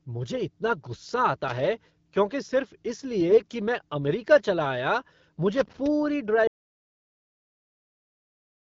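Between 3.28 and 3.54 s, right after "क्योंकि सिर्फ इस", the speech turns hoarse and gargly while keeping roughly its pitch and loudness. These are AMR bit errors. Over about a quarter second, which fits around a dozen 20 ms frames, a few percent of the weakly protected bits arrived flipped. The decoder rebuilt wrong pulse positions and slightly wrong gain and spectral values. Unlike crackle, the damage lives inside the voice itself rather than sitting on top of it. The surrounding AMR-WB coding at 12.65 kbit/s sounds clean.

From 5.54 to 5.87 s, after "मैं अमेरिका चला आया", comes a burst of irregular crackle and scratching. This is loose connector crackle. A worn contact is rapidly making and breaking, chopping the signal. It differs from the codec errors because it is erratic clicking laid over the sound, not a change in vocal timbre.

At 6.47 s the sound cuts off mid-flow and stays in total silence, with no room tone, to the end of the clip. 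This is an audio dropout to silence, likely caused by the input being lost while silence kept being written. It differs from a fade or a quiet pause because the background vanishes completely and instantly.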